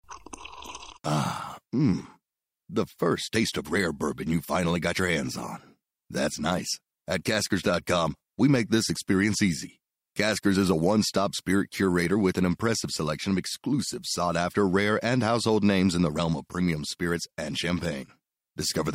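A speech recording with no technical faults to report.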